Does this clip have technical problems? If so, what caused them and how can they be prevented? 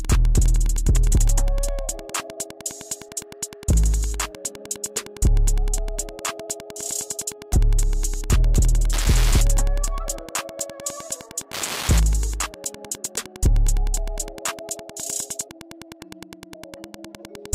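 Yes. Wi-Fi interference runs throughout the clip as a steady ticking close to ten times a second, which fits a beacon repeating every 102.4 ms. A nearby Wi-Fi radio's pulses are being rectified inside the audio circuit, so each beacon turns into an audible click, sitting roughly 20 dB below the wanted sound. On a spectrogram this appears as thin, evenly spaced vertical lines across a wide frequency range; the waveform shows small, regularly spaced spikes. Keep routers, phones and other Wi-Fi devices well away from the recorder, microphone and cables, and use shielded, balanced cabling.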